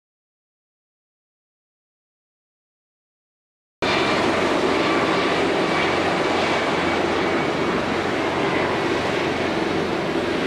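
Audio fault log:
0.00–3.82 s, audio dropout to silence: the input was likely lost before the clip began, so silence was written. The result is dead silence with no room tone until sound cuts in mid-flow.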